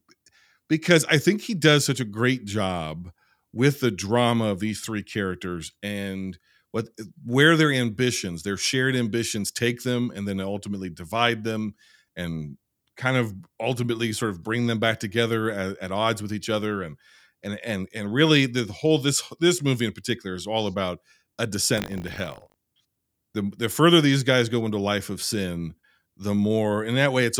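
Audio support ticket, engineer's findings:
Buffer tearing, 21.76–22.58 s, right after "is all about a". Robotic 50 Hz buzz riding on the speech, fitting a 20 ms buffer period. Probable component: playback ring buffer, with writer and reader pointers crossing each period. A small slice of each period replays audio from roughly 70 ms earlier, with hard joins. Unlike mains hum, the buzz vanishes in gaps between words.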